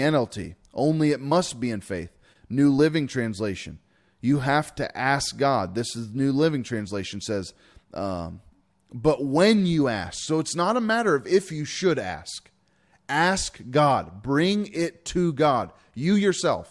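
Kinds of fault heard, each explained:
Nothing stood out as a problem when listening to this speech recording.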